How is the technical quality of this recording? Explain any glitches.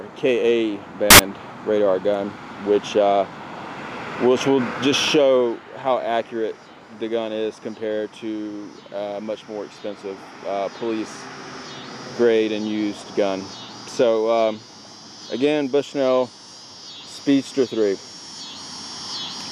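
There's one glitch worth flagging, right near the start. From about 1.10 to 1.19 s, so under a tenth of a second, the audio turns into a sharp blast of loud, harsh broadband noise. That's samples built from the wrong bytes: the reader assembled each sample's bytes incorrectly, maybe off by one, swapped, or misaligned. The rapidly changing low bits end up as the big part of every value, so the real waveform vanishes under harsh noise.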